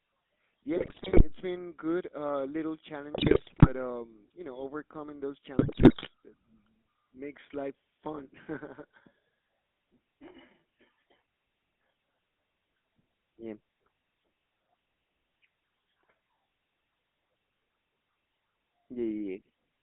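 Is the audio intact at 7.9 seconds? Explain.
No, not really. At 7.9 seconds, like everywhere else in the clip, the speech carries the sound of the GSM full-rate codec. It rebuilds the voice from a vocal-tract model fed by a sparse, regularly spaced pulse excitation, which gives that buzzy, gravelly grain you can plainly hear here. The band is squeezed to roughly 250 Hz to 3.6 kHz, so it sounds thin and phone-like, which fits a 13 kbps GSM link.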